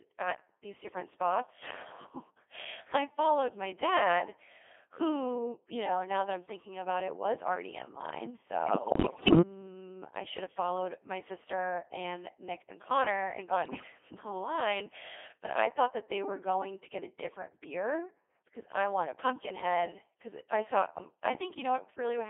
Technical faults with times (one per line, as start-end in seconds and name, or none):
0.00-22.30 Codec 2 vocoder
8.66-9.41 bit errors on digital voice radio
13.65-13.87 bit errors on digital voice radio